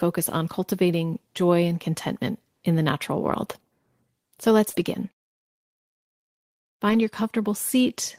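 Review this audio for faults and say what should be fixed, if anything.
Lost packet rebuilt from error correction, at 3.29–3.31 s just after "contentment in the natural", 4.73–4.79 s and 6.89–6.95 s: each packet arrived missing, and the next packet's low-bitrate backup copy was played, so no gap is heard. These stretches sound rougher and noisier for 20 ms, then 40 ms twice. The 40 ms stretches fit two consecutive packets.

Short concealed packet loss, at 4.69–4.75 s: about 40 ms never arrived in time. The decoder extended the preceding sound to fill it, leaving a brief smear before the error-corrected frames take over.

To prevent both, reduce packet loss and jitter on the network path, for example with a wired connection, less competing traffic or a larger jitter buffer.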